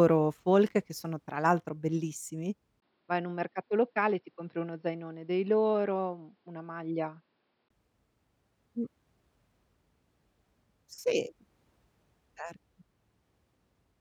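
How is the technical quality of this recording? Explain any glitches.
Quality drops for one stretch in the middle of the speech. From 2.80 to 7.70 s, right after "sono tra l'altro bellissimi", a brief gap of about 20 ms gives way to duller sound cut off above 5.4 kHz, a few dB quieter, with a new faint noise floor. The input was likely switched to a poorer device. The simultaneous change in level and noise floor distinguishes it from a simple low-pass filter.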